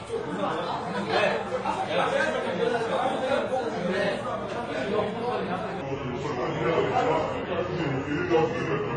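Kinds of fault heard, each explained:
Transcoding between lossy codecs: Throughout the clip the audio carries two layers of coding damage at once. The high end is cut off, and the smeared, swirly texture of a low-rate spectral-band-replication codec sits under the coarser pre-echo and warbling of an MP3 stage. This is most likely a chain that fits a very low-bitrate HE-AAC encode being re-encoded to MP3 at around 48 kbit/s, with the second encoder wasting bits on the first one's artefacts.
Section at the wrong speed: From 5.81 s to the end of the clip, the sound plays back at 0.776 times its original speed. Speed and pitch drop together, so everything in that stretch sounds slower, heavier and about four semitones lower than the preceding material, with the change arriving abruptly. The likely cause is that portion being resampled or played against the wrong clock rate during editing or playback, while the rest ran at the correct rate.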